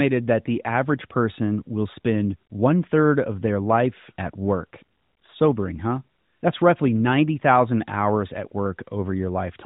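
There are no technical faults in this speech clip to describe in time order.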